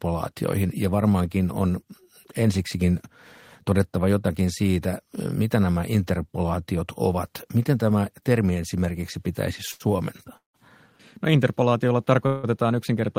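A short stall from a late packet at 9.71 to 9.82 s interrupts this speech clip. The last sound is held for about 86 ms while the receiver's jitter buffer sits empty, giving a brief drawn-out moment with a slight buzz or dip. When the packet lands, playback resumes exactly where it paused, so nothing is lost, but everything after runs 86 ms later. Two call audio freezes follow, likely from packets held up in transit draining the jitter buffer. At 10.37 to 10.56 s the receiver fills 172 ms, extending the final sound into a fading buzz or hiss that drops to silence for about 140 ms. At 12.26 to 12.45 s a 170 ms fill never drops to silence. Each time the audio picks up from the point it stopped, adding a gap rather than dropping material.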